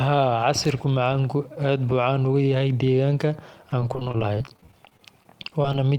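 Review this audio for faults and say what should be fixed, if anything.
From 3.69 s to 5.74 s the speech breaks up with repeated packet loss (robotic sound): around thirty short holes, none longer than 26 ms, each patched by extending the preceding sound, so about 18% of that stretch, roughly 360 ms in total, is concealment. On a spectrogram this shows as frozen, flattened harmonic slices interrupting the normal contours. The waveform shows copied cycles in place of changing ones. Prevent it with a larger jitter buffer and a more stable network path.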